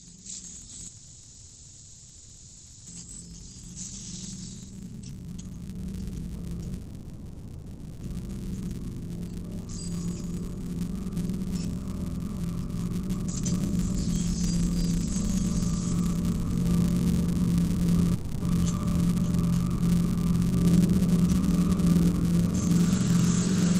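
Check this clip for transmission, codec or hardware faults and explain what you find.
Three kinds of fault run through this recording of everyday sounds: a filter restarted on every block, three call audio freezes, and three jitter buffer speed-ups.

Filter restarted on every block, throughout: a filter in the chain discards its state at each block boundary and starts from silence, so each block opens with a small transient. The blocks repeat at 188 Hz, which fits a 256-sample block, and the result is a steady buzz at that rate riding under the sound, louder where the sound is louder and fading with it.

Call audio freeze, at 0.87 to 2.88 s, 6.78 to 8.03 s and 18.14 to 18.43 s: the sound stalls and is stretched into a fading buzz or hiss for about 1.99 s, 1.23 s and 0.27 s. The likely cause is packets held up in transit, leaving the jitter buffer empty so the receiver had to fill the gap. 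When playback resumes it picks up where it stopped, with nothing lost, but everything afterwards is delayed by the length of the fill.

Jitter buffer speed-up, at 3.10 to 6.78 s, 13.23 to 16.73 s and 17.26 to 18.03 s: with more audio held in the buffer than it aims for, the receiver trims its excess delay by cutting out many short pitch-period pieces in a row. Playback runs at 143%, 120% and 109% of normal speed. That removes about one and a half seconds in the first stretch, under a second in the second, and a small amount in the third. The pitch stays put, but the sound feels hurried and its rhythm tightens, most obviously in the first stretch. This happens over the call path, whose 8 kHz bandwidth limit dulls the top end.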